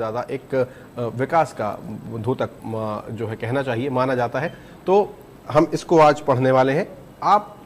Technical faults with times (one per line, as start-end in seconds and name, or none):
2.58-2.60 compressed frames skipped